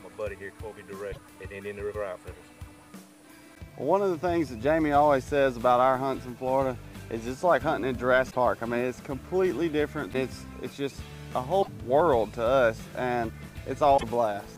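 Damaged data in a compressed stream breaks the audio four times: 1.09 to 1.18 s, 8.27 to 8.36 s, 11.59 to 11.68 s and 13.94 to 14.03 s. Each lasts under a tenth of a second. Corrupt bytes make the decoder misread frames and hunt for sync, leaving a brief chirp or blip.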